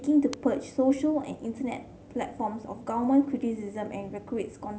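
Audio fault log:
0.33 s electrical switching spike. A sharp snap lands on top of the speech. It lasts only a couple of milliseconds and peaks at about -15 dBFS. It is likely a nearby switch or discharge arcing, with the audio line picking up the burst.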